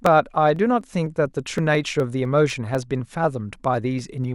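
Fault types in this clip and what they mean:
Damaged data in a compressed stream: bytes in the compressed speech were lost, zeroed or overwritten, so the decoder misread the affected frame, lost its place in the stream and had to hunt for the next valid frame header before normal playback resumed. At 1.58 s this shows as a very short corrupt burst, only about 4 ms long, a tiny chirp or blip that cuts into the speech.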